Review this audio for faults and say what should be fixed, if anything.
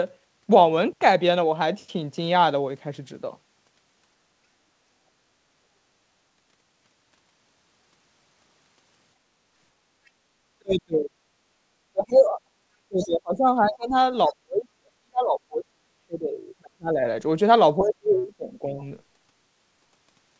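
Background gated by the echo canceller: while the loudspeaker played, the echo canceller clamped the microphone. Room sound dips about 8 dB from 9.21 to 9.45 s, then recovers.

Other side's voice leaking through: residual echo likely slipped past incomplete cancellation. Faint scraps of a second voice, roughly 30 to 40 dB below the speech, appear at 10.06–10.1 s and 17.82–17.87 s.

Speech suppressed in double talk: the canceller likely mistook overlapping talk for echo and attenuated everything. The speech drops by roughly 25 to 40 dB at 10.58–11.17 s, 11.92–12.53 s, 12.88–13.94 s, 14.28–17.03 s and 17.78–18.81 s.

To prevent these, improve echo path modelling and double-talk detection so the canceller removes echo without ducking near-end speech or background sound.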